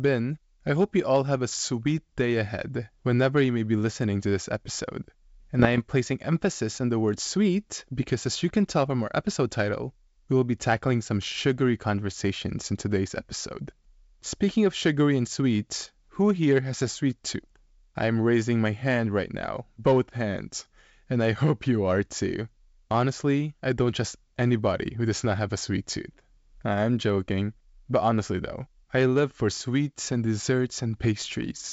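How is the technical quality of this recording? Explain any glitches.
The recording has one glitch. It rides on a G.722 wideband phone link, and the coding itself leaves at most faint traces.

From 5.59 to 5.81 s, between "listening to this episode" and "placing emphasis on the", bit errors on the ADPCM link, at roughly 0.2 percent, throw off the decoder's step size and predictor. Pops and rough bursts result, with brief level jumps. The waveform shows spiky excursions, and the spectrogram shows broadband vertical streaks.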